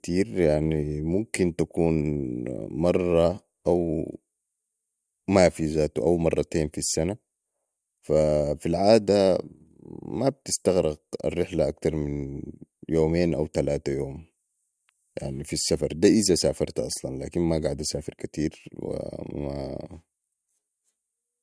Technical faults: none

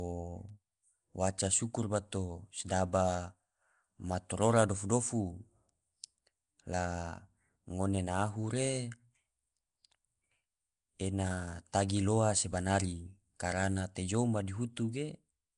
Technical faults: Nellymoser compression; bit error spike

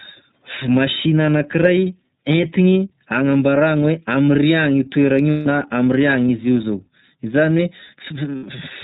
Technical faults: iLBC codec; lost iLBC frames

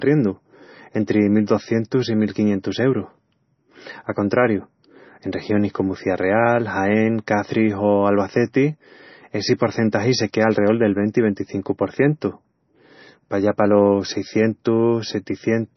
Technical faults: MP3 compression

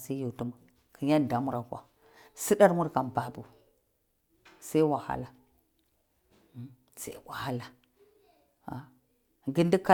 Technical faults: none

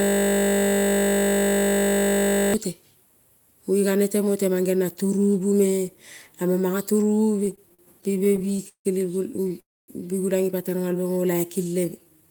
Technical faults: system hang loop; repeated stalls (stutter); call audio freeze; jitter buffer slow-down

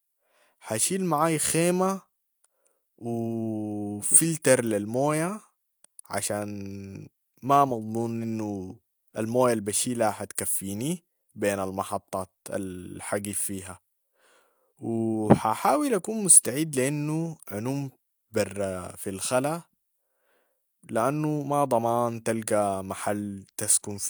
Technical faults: none

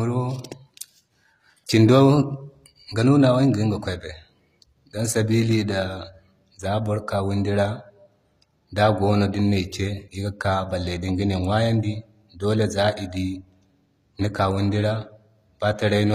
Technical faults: HE-AAC compression

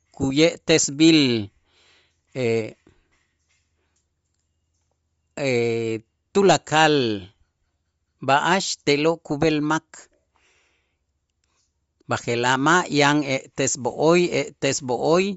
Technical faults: Bluetooth LC3 compression

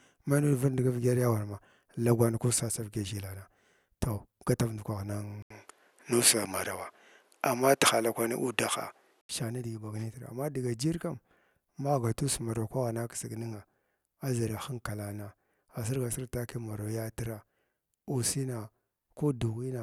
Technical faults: input switched to a poorer device

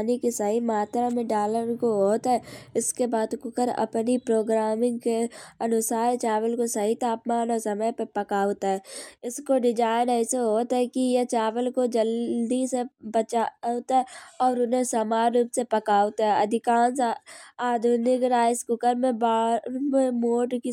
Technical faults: none

